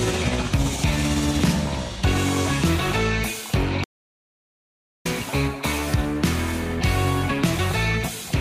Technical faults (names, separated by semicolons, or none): audio dropout to silence